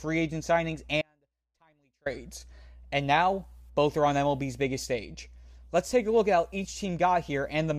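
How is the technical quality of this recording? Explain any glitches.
There's one clear glitch in this speech clip: an audio dropout to a faint residue, running from 1.02 s to 2.06 s, right after "agent signings". For about a second the speech just cuts out abruptly, leaving only a faint wash of sound roughly 35 dB below normal level. That hard on-off edge rules out a natural pause. It's likely the signal feed broke while the path downstream stayed live.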